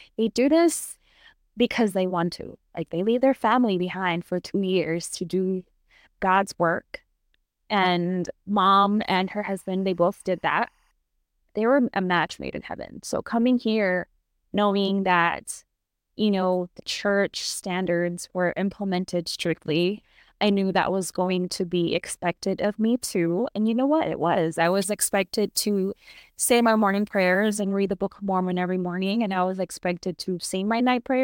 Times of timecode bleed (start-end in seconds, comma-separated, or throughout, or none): 8.91-10.91